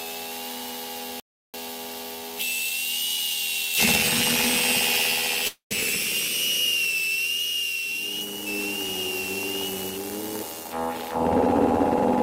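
At 1.20 s the input signal was likely lost, perhaps through a disconnected device or failed link, while recording carried on writing silence. This audio dropout to silence cuts the everyday sound off abruptly until 1.54 s. The 340 ms gap is dead silence, with no background left, and whatever sounded then is gone.

From 5.47 to 5.73 s packets were likely held up in transit and the jitter buffer ran dry, causing a call audio freeze. The receiver stretched the last sound into a fading buzz that settles into about 130 ms of silence. The sound then resumes exactly where it stopped, so 234 ms has been inserted and nothing is lost.

Between 10.60 and 11.10 s the jitter buffer held more audio than it wanted, so the receiver trimmed small pitch-period pieces over and over to shed roughly a fifth of a second of delay. During this jitter buffer speed-up the sound runs at 135% speed with its pitch unchanged, so it sounds rushed.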